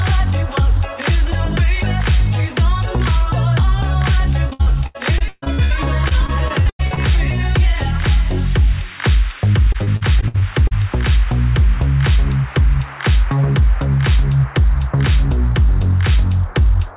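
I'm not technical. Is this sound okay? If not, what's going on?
No. From 4.5 to 5.72 s, 6.08 to 6.98 s and 9.72 to 10.73 s there's repeated packet loss (robotic sound). Bits of the call audio kept going missing, and the gaps were filled by stretching the last sound, so it turns choppy with pieces missing. A single dropout would be one clean silence instead.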